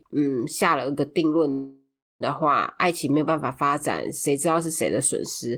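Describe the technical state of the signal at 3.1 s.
At 3.1 s the speech signal is intact, with no technical fault audible at that moment.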